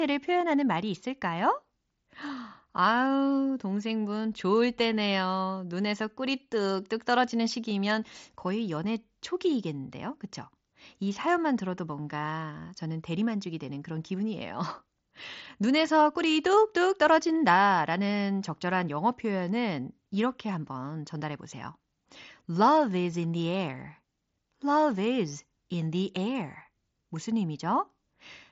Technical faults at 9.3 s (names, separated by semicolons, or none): none